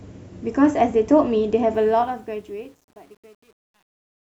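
From 1.74 s the fade-out grows gritty as truncation distortion sets in, which fits a 9-bit stage with no dither. From 2.38 s to the end, the tail is at its grittiest.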